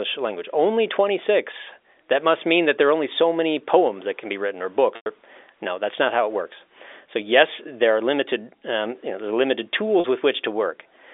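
A buzzy, held tone fades into silence across 4.96 to 5.06 s, after "can be written or" and before "no that's not how", and a shorter 40 ms one follows "know there are limited" at 10.0 s. This is packet loss with pitch repetition: the receiver bridged each gap in the narrowband G.711 telephone sound by repeating the last pitch period.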